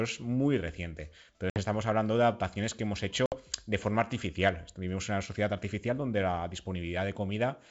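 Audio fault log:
1.50–1.63 s and 3.26–3.37 s, packet loss on an ADPCM call: 60 ms silent gaps after "es muy reciente" and "de adaptaciones que hemos"; the decoder's predictor and step size drift, so speech resumes slightly distorted before settling.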